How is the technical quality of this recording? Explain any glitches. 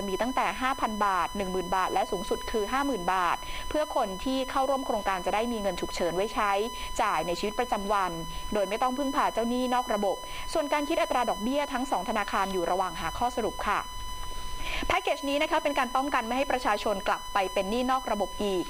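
The recording's quality is hurt by a steady USB whine running through the whole clip. USB whine: a fixed 1 kHz tone, strongest at 1 kHz and sitting only about 10 dB below the audio. It comes from the bus drawing current in 1 ms frames, leaking through power or ground. A spectrogram shows an unbroken horizontal line at 1 kHz.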